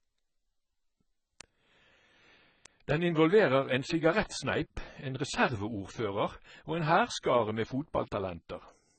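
From the very start the speech has the dull, smeared sound of AAC compression, most likely AAC-LC squeezed hard, which fits a bitrate of around 16 kbps. Nothing comes through above 8.6 kHz, and sibilants and held sounds get that warbly, fizzy texture from coarse quantisation.

From 0.16 s to 8.91 s there's a steady run of word clock ticks, around thirty of them, roughly one every third of a second, sharp and uneven in strength. They come from a digital link read on a free-running clock that drifts from the sender's by something like 70 ppm. Each time the clocks slip past each other, a single sample gets dropped or repeated.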